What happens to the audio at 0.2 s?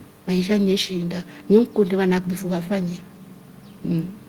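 At 0.2 s the speech is intact, with only the faint room noise, about 35 dB below the speech, sitting in the background as part of the recording.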